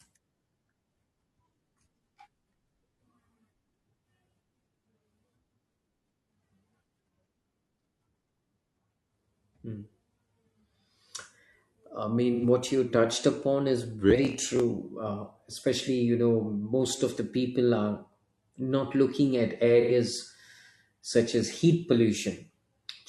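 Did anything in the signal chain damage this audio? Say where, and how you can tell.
Yes. AAC frame loss with concealment occurs at 12.34 to 12.44 s, just before "what you touched upon", and at 19.81 to 19.92 s, right after "are not looking at". Each patch lasts about 85 ms, which fits two lost codec frames. The damage is at the codec stage. With the frames missing, the decoder rebuilds each gap from the last good spectrum, so the speech becomes a brief smeared, noisy patch rather than dropping to silence.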